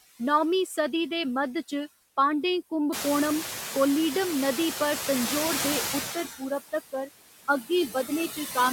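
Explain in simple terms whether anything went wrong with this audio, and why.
Throughout the recording there are noise suppressor artifacts. The room's background noise rises noticeably from around 3 seconds, and a noise suppressor is working hard to push it down in the gaps between words. Because it decides frame by frame what counts as noise, the leftover background pumps up and down, sinking in pauses and swelling back under the talking.

There are also three places where speech is cut by the noise suppressor. The suppressor mistakes parts of the talking for background noise and turns them down. The first comes right after "तंजौर दे", between 6.15 and 6.51 seconds. The second is between 6.72 and 7.09 seconds, and the third is between 8.32 and 8.57 seconds. In each, roughly a tenth of a second of speech, likely soft consonants or word endings, drops away and sounds swallowed or faint.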